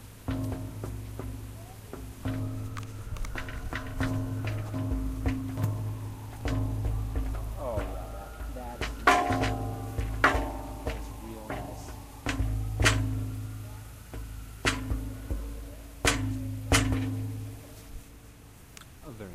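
Everyday sounds, with no technical fault audible anywhere.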